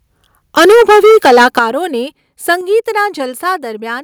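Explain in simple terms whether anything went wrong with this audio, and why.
Microphone overload, from 0.57 to 1.62 s and again briefly from 2.50 to 2.53 s. The speech in these stretches sounds harsh and crackly, most likely because the microphone was set too loud. The loudest moments were bigger than the recording could hold, so their tops got chopped flat. In the first stretch, roughly a third of the sound is cut off this way. The second is short and much milder.

Microphone volume stepped down, at 0.59, 1.59 and 2.61 s. At each of these moments the speech and the background suddenly get quieter in one jump. The likely cause is the calling software noticing the overload and turning the microphone down to stop it. The first drop is slight, the second at 1.59 s is large, and the third is moderate.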